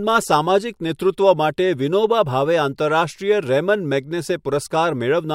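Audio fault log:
No fault can be heard anywhere in this speech recording. There is nothing to enter in the log.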